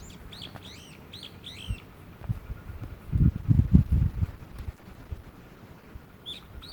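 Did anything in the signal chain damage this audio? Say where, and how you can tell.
Yes. A call bitrate drop in the codec stage from 3.3 s to the end: the sound turns rough and muffled, and the spectrogram's upper band vanishes, which fits a fall from 128 to 12 kbps.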